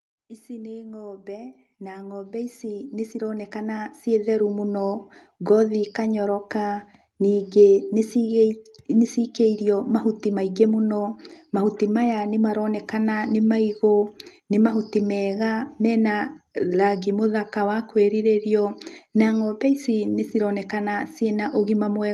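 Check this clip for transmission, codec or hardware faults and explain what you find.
One fault stands out, automatic gain rising, between 0.47 and 4.77 s. The automatic gain control judged the incoming level too low and stepped its gain up steadily over those four seconds or so, by about 19 dB in all. The speech and the background noise floor therefore swell together as a slow, even fade-up rather than a jump. The opening words start quieter and the room tone climbs along with them until the level settles. The audio has clearly passed through a WebRTC call path with the Opus codec, and its content stops at about 12 kHz.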